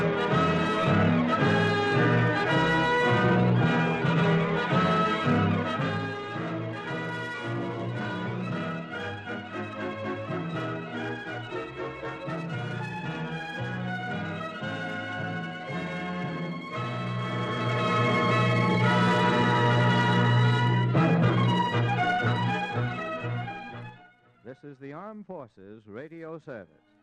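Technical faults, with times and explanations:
5.63–6.14 s and 23.81–24.15 s, zipper noise: The level drops in audible stairs instead of a glide. The first drop moves in 2 dB steps, falling about 10 dB. The second uses 4 dB steps and falls about 15 dB. Each jump lands on the waveform unsmoothed and leaves a tiny click. At around ten steps a second, the clicks merge into a brief ticking rasp, coarser in the second drop.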